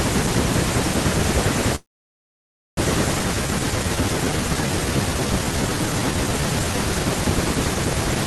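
A call audio freeze runs from 1.75 to 2.79 s. The last bit of audio is carried on briefly as a fading buzz or hiss before the sound drops out. Roughly 0.95 s of that one-second gap is plain silence. The likely cause is packets stalling in transit until the jitter buffer drained, leaving the receiver nothing to play. When the audio returns it picks up exactly where it broke off, so nothing is lost. The gap simply pushes everything after it later by about a second.

A skip ahead comes shortly after, at 3.19 to 3.21 s. Playback jumps forward with almost no gap. Around 0.7 s of speech is gone, and the audio on either side of the cut is butted together almost directly. This happens when a run of audio is thrown away while later packets are already queued. It cancels much of the delay the freeze added.

A jitter buffer slow-down follows from 3.28 to 6.77 s. The buffer was running low or had just raised its target delay, so the receiver stretched the audio by repeating single pitch periods and slivers of pauses, many times over. 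Across that stretch it added about 0.62 s, and the speech plays at roughly 83% speed. The pitch stays the same, but sounds are drawn out and can carry a faint warble. The band limit near 12 kHz and the coding noise of the Opus call path, consistent with a bitrate around 20 kbps, are present throughout.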